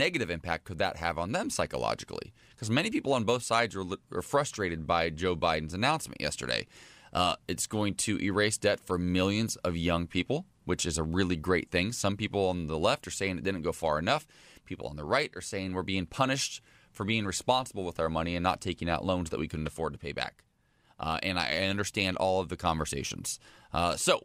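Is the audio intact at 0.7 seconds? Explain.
Yes, at 0.7 seconds the speech plays through intact, with no dropout, click or other fault at that moment.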